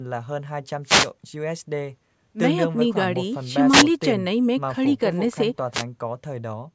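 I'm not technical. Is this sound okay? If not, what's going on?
No. There are three wireless microphone noise hits, at about 0.83 to 1.11 s, 3.70 to 3.85 s, and 5.72 to 5.84 s. Each is a quick swish of static as the radio link briefly fades and the receiver's hiss washes over the speech.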